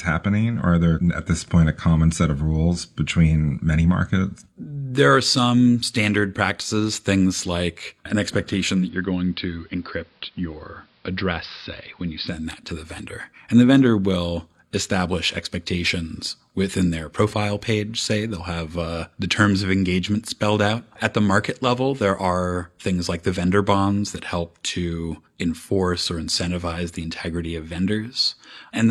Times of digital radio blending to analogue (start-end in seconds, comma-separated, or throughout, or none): 8.71-12.46